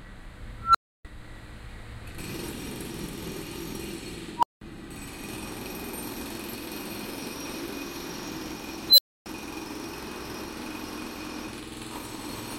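Everyday sound hit by an unstable filter three times. At 0.60–1.05 s, 4.37–4.61 s and 8.89–9.26 s, a tone near 1.5 kHz, 1 kHz and 4 kHz swells in 144, 63 and 87 ms, clips, then cuts out for 302, 186 and 279 ms as the runaway recursion overflows and resets.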